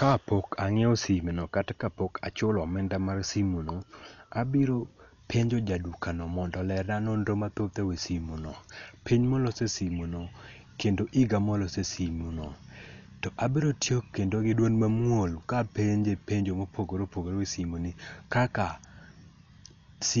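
All the way through, the speech sounds dull and cut off above 7 kHz, with rough, fluttering noise around tones, likely heavy Dolby Digital compression at something like 48 kbps.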